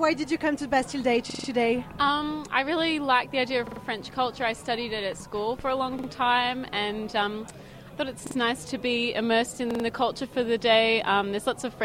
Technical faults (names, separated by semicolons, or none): repeated buffer